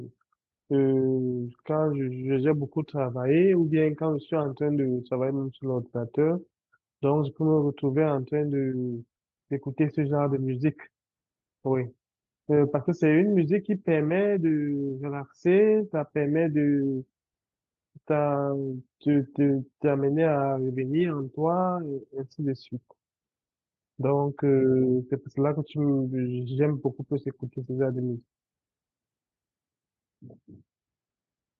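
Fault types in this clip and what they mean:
No faults detected; the speech shows only the ordinary character of a call codec path.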